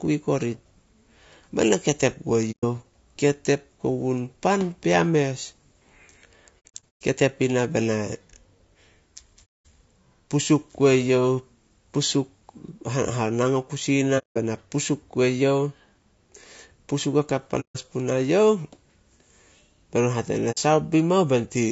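It's a speech recording, and the whole thing has a rough, grainy edge, with noise filling in between the harmonics and a top band that sounds thin and a bit synthetic. That's most likely low-delay AAC compression, AAC-ELD, the video-call codec. Its short frames can't separate the pitch harmonics cleanly, and the damage is plainly audible here, which fits a bitrate somewhere around 32 kbps. On top of that there are six soft-edged dropouts that fade out and back in, classic AAC frame loss with muting, where the decoder zeroes the missing frames and the overlapping windows smooth the edges. They sit at 2.51 to 2.64 s right after "ketep gue", at 9.45 to 9.65 s, at 14.18 to 14.37 s just after "o kusi", at 17.60 to 17.77 s leading into "punae youh", and a short one at 20.51 to 20.58 s. The messiest is 6.69 to 7.02 s, where about 270 ms goes missing in pieces scattered over 420 ms, and the longest gap there runs about a tenth of a second.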